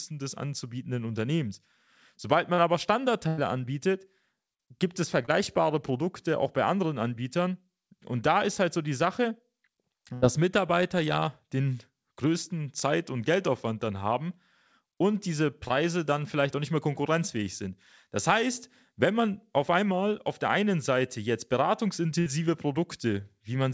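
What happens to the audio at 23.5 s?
At 23.5 s the speech runs on intact, with nothing breaking into it beyond the ordinary band limit of the call path, which leaves nothing above 8 kHz.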